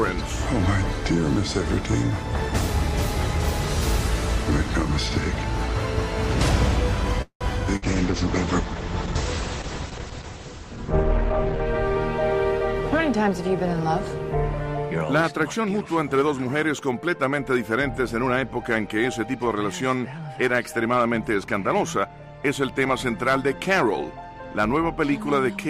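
From 7.22 to 7.44 s, a call audio freeze: packets were likely held up and the jitter buffer ran dry, so the last sound is stretched into a fading buzz or hiss, then about 90 ms of silence, before resuming without loss.

At 7.77 to 7.85 s, a burst of packet loss leaves around 60 ms of audio missing, covered by a brief fading continuation of the preceding sound before playback jumps ahead.

From 7.78 to 11.72 s, a call bitrate drop: the encoder fell from 64 to 9 kbps and its bandwidth narrowed from 20 kHz to 8 kHz, leaving the audio coarse and muffled.

From 18.24 to 19.55 s, a jitter buffer speed-up trims roughly 150 ms of short pitch-period pieces to shed excess delay, so the sound runs about 10% fast at unchanged pitch.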